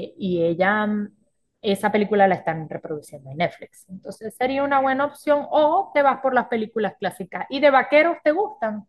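Speech recording, with no technical faults heard at any point.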